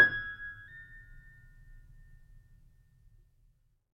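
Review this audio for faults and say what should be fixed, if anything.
From 0.68 s to the end, the music jumps about 9% faster and roughly 1.5 semitones sharp, a classic wrong sample rate. Speed and pitch rise together, which fits 44.1 kHz material being played back at 48 kHz with no conversion. To prevent it, make sure the playback chain resamples to the device rate, or opens the device at the file's own rate.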